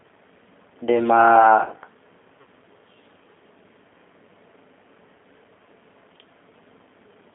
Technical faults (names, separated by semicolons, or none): G.729 codec; VoIP packet loss concealed by the speech codec